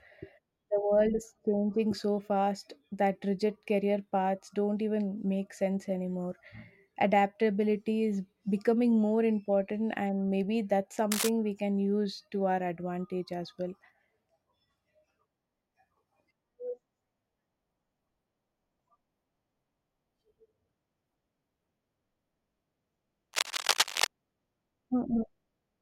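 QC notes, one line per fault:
11.11–11.29 s, cable scratch noise: between "important and maybe that's" and "we can use to", a short burst of dense, uneven crackle sits a little below the speech level. This is likely a worn cable or connector being moved, so its contact resistance jumps about and adds ragged noise.
23.33–24.07 s, cable scratch noise: a longer scratchy rustle, roughly as loud as the speech, with the same likely cause of a disturbed, intermittent contact.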